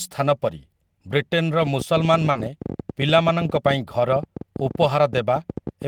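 Speech in which single packets were lost at 0.57 to 0.59 s and 3.19 to 3.21 s, and two more at 2.35 to 2.41 s. In each case the following packet carried a low-bitrate backup copy, so the decoder played that instead of leaving a gap. This lost packet rebuilt from error correction sounds briefly rough and noisy for 20 ms, and for 40 ms at 2.35 s. Just before that, from 2.31 to 2.37 s, 40 ms of audio never arrived in time at all. The receiver covered this short concealed packet loss by extending the preceding sound and blending back, which gives a short smear or wobble. From 1.63 s to the end, an unevenly spaced train of clicks runs at about 13 per second, peaking a little above the speech and audible in pauses too. The likely cause is electrical interference or a faulty connection or power supply injecting repeated pulses.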